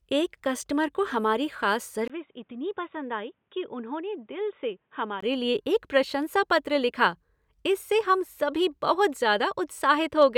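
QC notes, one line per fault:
2.08–5.22 s, input switched to a poorer device: after "कस्टमर को हमारी खास", likely a narrower-band input takes over. A 20 ms gap follows, then dull sound with nothing above 3.8 kHz, about 10 dB quieter, over faint new background noise.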